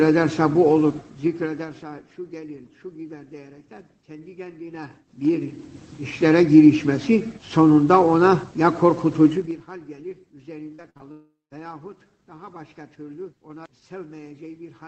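The audio passed through a call path whose top end stops near 8 kHz, which fits Opus at about 20 kbps. Zipper noise appears twice. From 4.65 to 5.89 s the level rises about 20 dB in 3 dB jumps, roughly five per second. From 9.30 to 9.64 s it falls about 20 dB at roughly twenty jumps per second. Each unsmoothed step leaves a small click. Repeated packet loss follows from 10.75 to 11.01 s. Short holes, the longest 56 ms, are patched by stretching the last sound. About half the span is filled this way, so it sounds choppy and robotic. From 11.11 to 11.53 s comes a longer gap. A fading buzz covers the missing audio, then about 160 ms of silence. A long network dropout is the likely cause.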